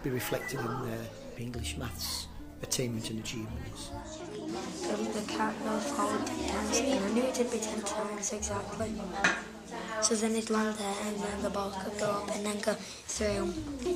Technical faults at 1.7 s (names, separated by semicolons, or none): drift correction step